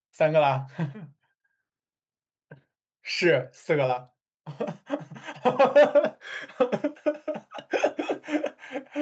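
No technical faults can be heard in this speech: the content above 8 kHz is missing, as expected for audio that has passed through call microphone processing and a WebRTC call path, and the signal stays continuous and steady throughout.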